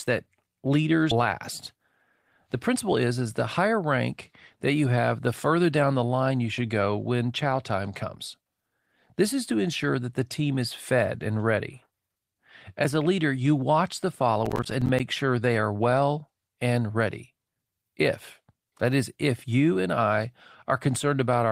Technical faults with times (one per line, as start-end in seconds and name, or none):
1.11-1.26 skip ahead
2.47-3.74 jitter buffer speed-up
14.46-15.00 processor overload crackle